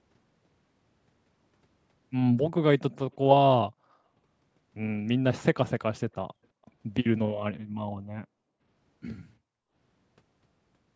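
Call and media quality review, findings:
Echo leak, 3.12–3.16 s: brief, very faint delayed copy of the speech, around 40 dB below it, trailing by about 340 ms. Likely the far end's loudspeaker pickup slipping past its echo canceller and returning down the line.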